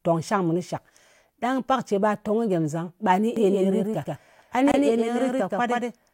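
It's a speech clip, and from 3.37 s to the end it's got a doubled audio track: a second full-band copy sits about 150 ms behind at roughly the same level, switching in abruptly with no decay or room colour, most likely because the audio's being captured again through a slower path. On top of that, there's a gap at a join of encoded pieces from 4.72 to 4.74 s, a 23 ms hole with smeared edges, after which the sound just carries on from where it stopped. That's the leftover encoder delay and last-frame padding from separately encoded pieces that were joined without trimming, and it fits the joins recurring every 6 s.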